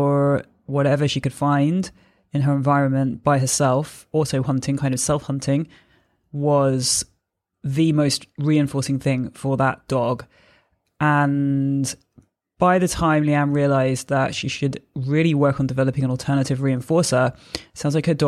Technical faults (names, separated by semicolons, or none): none